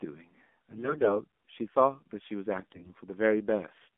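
The speech here has been carried over the AMR narrowband mobile codec, with its 8 kHz sampling passing nothing above 4 kHz and the line limited to a 200 Hz to 3.5 kHz phone band, and a synthetic, buzzy edge that fits a low rate near 7.4 kbps. The voice sounds thin, muffled and clearly processed throughout. AMR bit errors then strike from 0.70 to 1.17 s and from 2.58 to 2.99 s. On a weak link, roughly one bit in ten arrived flipped across about twenty frames each time, misplacing the excitation pulses. Pitch and level hold, but the voice turns hoarse, scratchy and gargly.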